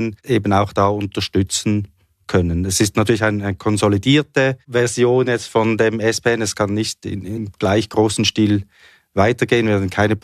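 At 7.34 to 7.38 s the speech jumps ahead by roughly 20 ms where compressed frames were skipped.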